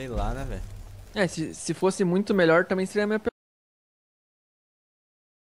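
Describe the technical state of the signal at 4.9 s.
At 4.9 s you're sitting inside an audio dropout to silence. The sound cuts off abruptly at about 3.29 s and never comes back, so everything from there to the end of the clip is dead silence, with no room tone or noise floor at all. That points to the input going away, likely a lost connection or a mute, while the recorder kept writing empty samples. Whatever was happening in that stretch just isn't there.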